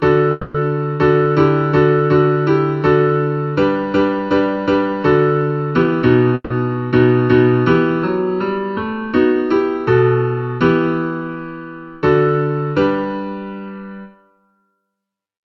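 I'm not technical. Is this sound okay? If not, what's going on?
No, there are three separate problems.

Channel delay (comb filtering) runs through the whole clip. One of the two channels arrives just under a millisecond behind the other, and when they are combined into one, parts of the sound cancel at a regular series of pitches, starting around 700 Hz. That gives everything a hollow, slightly phasey, boxed-in character that never goes away.

Call audio freeze happens twice, from 0.31 to 0.61 s and from 6.34 to 6.51 s. During each one, the last bit of sound is stretched out into a buzzy, fading tail instead of moving on. In the second freeze it briefly drops to silence before the sound resumes. The cause is likely that pieces of the call were held up on the network, so the receiving end ran out of sound to play and improvised a filler. When the delayed pieces arrived, playback picked up where it had stopped. 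Nothing is lost, but the pause pushes everything later, by roughly a fifth of a second the first time and a little less the second.

Jitter buffer speed-up happens twice, from 5.71 to 5.92 s at one and a half times normal speed, and from 13.66 to 14.79 s at about 1.2 times. The receiver had built up too much waiting sound and caught up by snipping out many tiny slices, about a tenth of a second in total the first time and about a fifth of a second the second time. The pitch stays the same, but those moments sound rushed.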